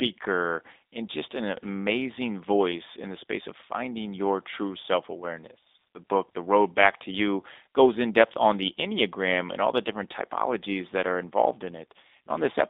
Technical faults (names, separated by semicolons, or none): G.729 codec